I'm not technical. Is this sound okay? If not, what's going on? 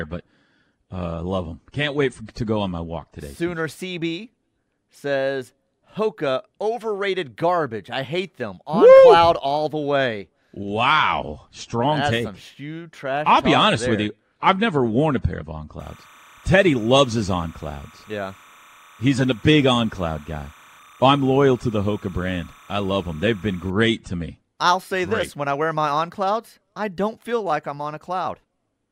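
No, there's timecode bleed from 15.8 to 23.7 s, after "a pair of on" until "to me I'll say": a faint chirpy warble leaking in from a neighbouring timing signal.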